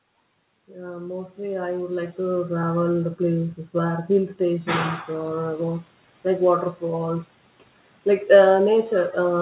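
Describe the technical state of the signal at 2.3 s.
At 2.3 s the automatic gain control is partway through a gradual boost. Having judged the input too quiet, it raises its gain by about 11 dB between 0.67 and 2.76 s, just before "the places where hill". The speech and the background noise swell together rather than the speech alone getting louder, so the noise floor climbs through this stretch. The sound is band-limited to 4 kHz, which fits a narrowband call codec.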